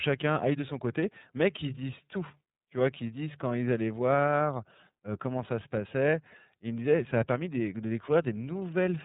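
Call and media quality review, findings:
iLBC codec on the speech path throughout; narrowband frame-by-frame coding, fits the 13.33 kbps, 30 ms mode. Nothing above 3.8 kHz, plainly rough, synthetic texture.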